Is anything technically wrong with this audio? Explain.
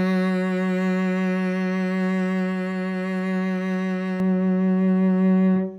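Yes. From 4.2 s to the end of the music, de-emphasis has been applied wrongly: a treble cut was applied to audio that carried no matching boost, or was applied twice. The spectrum tilts smoothly downward, about 11 dB lower at 10 kHz than at 1 kHz, so the sound turns dull and muffled. On a spectrogram the upper bands fade abruptly at 4.2 s, with no sharp cut-off.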